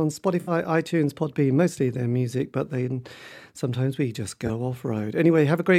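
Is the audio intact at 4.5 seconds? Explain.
No. A corrupt frame concealed runs from 4.46 to 4.50 s. The decoder detected damaged data in a short run of frames, three in all, and covered them itself, by muting them or with a sign-scrambled copy of the last good spectrum.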